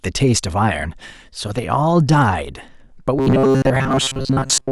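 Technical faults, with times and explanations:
3.19–4.71 s: robotic sound from repeated short buffers, a metallic 134 Hz buzz, likely a 7.5 ms block looped over most audio; spectrogram shows rigid harmonic stripes.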